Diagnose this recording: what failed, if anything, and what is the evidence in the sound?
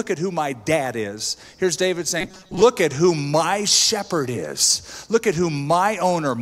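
Audio likely reached the driver or buffer stage too seldom, so the last 5.3 ms kept repeating while real audio was skipped. From 2.21 to 2.62 s, robotic sound from repeated short buffers leaves a rigid, metallic 188 Hz buzz over roughly 70 percent of that span.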